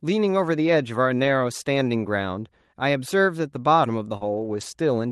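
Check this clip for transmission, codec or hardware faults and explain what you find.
Yes, there are packet-loss faults in this speech, carried over an Opus call path whose sound fits about 32 kbps with a 12 kHz bandwidth.

Lost packets rebuilt from error correction occur from 1.23 to 1.29 s and from 4.21 to 4.63 s. About 40 ms and then 220 ms were lost. The decoder played low-bitrate copies carried in the following packets. There is no gap, but those stretches sound rougher and noisier.

A short concealed packet loss occurs from 4.17 to 4.23 s. About 40 ms never arrived in time. The decoder extended the previous sound, heard as a brief smear before the audio blends back in.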